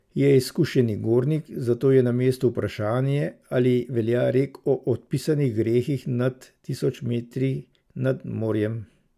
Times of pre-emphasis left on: none

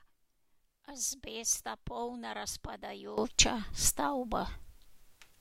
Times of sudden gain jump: 3.18-5.40

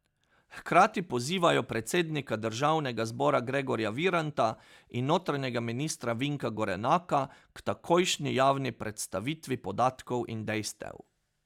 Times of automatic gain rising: none

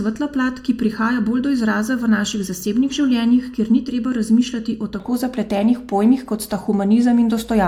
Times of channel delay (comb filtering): 0.00-5.00

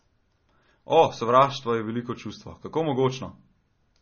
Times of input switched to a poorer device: none

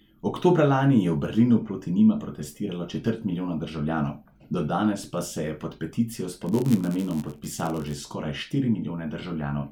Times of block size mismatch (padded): 6.45-8.00

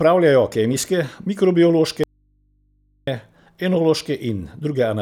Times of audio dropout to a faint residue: 2.04-3.07

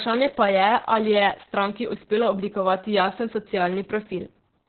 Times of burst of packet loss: none

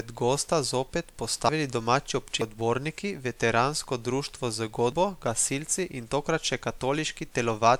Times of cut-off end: none

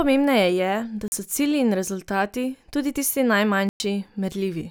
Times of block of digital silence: 1.08-1.12, 3.69-3.80

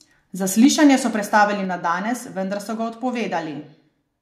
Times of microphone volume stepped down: 0.65, 1.65

